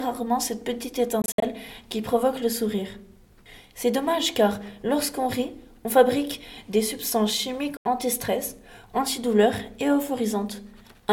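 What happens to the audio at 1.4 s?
Right around there the sound breaks up: between 1.22 and 1.43 s it keeps cutting out in short gaps, about 122 ms of silence in all across that 0.2 s stretch, the longest single hole 61 ms. When it comes back it has jumped ahead rather than picking up where it stopped. That's likely a Bluetooth dropout, with packets arriving too late and being discarded, and the pattern fits roughly six lost packets.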